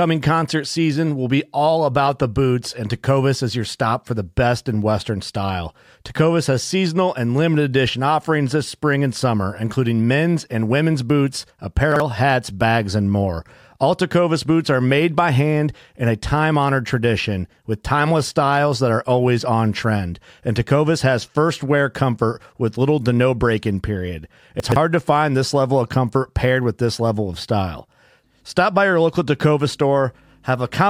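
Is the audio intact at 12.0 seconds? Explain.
No. From 11.92 to 12.0 s the speech has chunks out of order: a 40 ms chunk arrives one position late and plays after the chunk that should follow it. Nothing is missing, but the swap leaves three hard joins, heard as a brief jumbled stutter.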